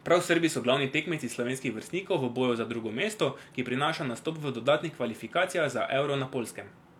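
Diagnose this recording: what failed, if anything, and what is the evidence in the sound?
No failure found; nothing in this recording points to one.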